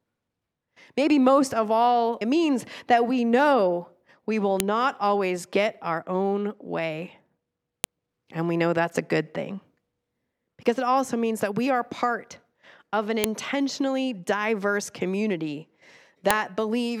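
At 4.60, 7.84, 13.24 and 16.31 s a sharp, loud click cuts through the speech: a file header played as audio. Separate WAV segments were joined with their headers intact, so each header's bytes reproduce as a brief burst of samples at the segment boundary.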